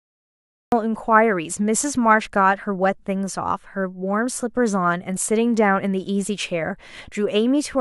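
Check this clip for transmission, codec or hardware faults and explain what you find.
There is one fault, a cut-off start. The clip is digital silence from 0 to 0.72 s, then speech begins mid-sound because capture or the stream started late. There is no natural attack. The waveform jumps from a flat line straight into the speech, and the spectrogram shows a hard vertical edge.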